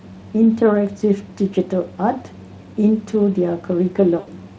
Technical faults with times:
4.19-4.30 VoIP packet loss concealed by the speech codec

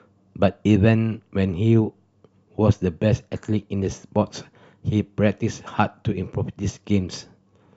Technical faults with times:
none

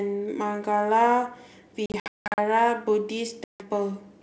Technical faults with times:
1.86-2.39 packet loss on an ADPCM call
3.44-3.66 packet loss on an ADPCM call

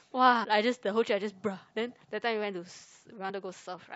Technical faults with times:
0.43-0.45 damaged data in a compressed stream
3.29-3.31 damaged data in a compressed stream

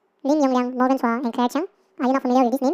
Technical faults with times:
0.00-2.73 audio read two samples at a time (double speed)

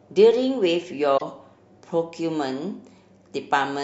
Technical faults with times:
1.14-1.22 damaged data in a compressed stream

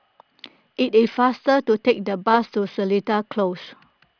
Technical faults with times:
none

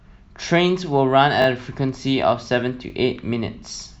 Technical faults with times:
1.42-1.46 repeated buffer
2.90-2.92 repeated buffer

